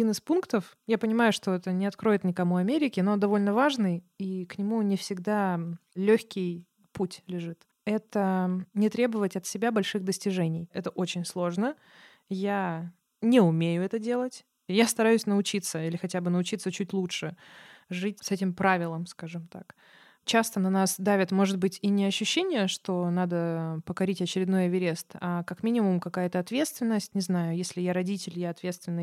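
Nothing here to flag: the speech runs from beginning to end without any technical problem you can hear.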